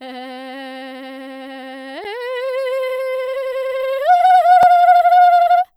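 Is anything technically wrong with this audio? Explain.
Yes. The music has two blocks of digital silence, one at 2.04 s lasting about 7.4 ms and one at 4.63 s lasting about 2.9 ms. The second matches a 128-sample buffer. In each case the program most likely failed to fill its output buffer in time, so a stretch of samples became silent. The signal drops straight to nothing and returns with no fade. The 2.04 s gap is short enough to register as a tick or dip rather than a hole, while the 4.63 s one is heard as a single tick. A fade-out dropout would sound softer, and concealment would fill the gap with sound instead of silence.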